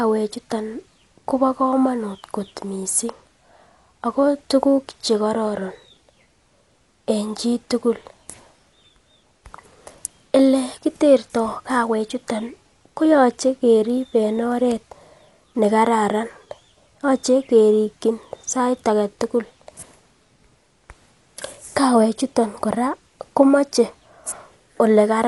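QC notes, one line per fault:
Throughout: Dolby Digital compression, likely, with plainly audible codec damage. The speech is dull, with nothing above about 11.5 kHz, which fits a low rate near 64 kbps. The encoder starved many frequency lines of bits, so dither noise fills them and tones sound rough and fluttering.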